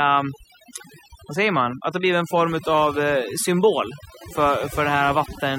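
From start to finish the speech carries overdone noise removal. A noise reduction stage was driven too hard, so individual frequency bands that sat close to its noise estimate were pulled far down or removed outright, and the quieter parts of the voice went with them. The background between phrases drops to near silence scattered with twinkling specks.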